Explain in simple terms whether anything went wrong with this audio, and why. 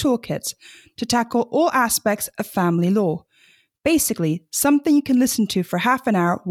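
Nothing went wrong with this audio, because no fault can be heard anywhere in it.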